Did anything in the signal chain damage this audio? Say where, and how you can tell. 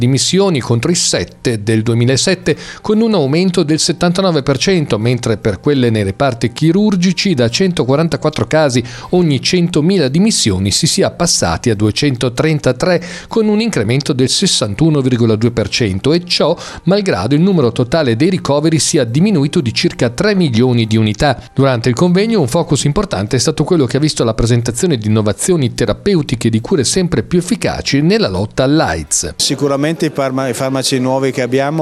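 Yes. Two isolated clicks at 15.14 s and 19.15 s are dropped samples: the waveform jumps abruptly where a handful of samples are missing, producing a thin vertical line across the spectrum. The likely stage is the driver or buffer, briefly losing data during transfer.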